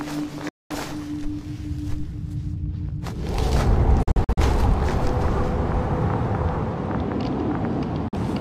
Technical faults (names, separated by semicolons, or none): digital broadcast dropout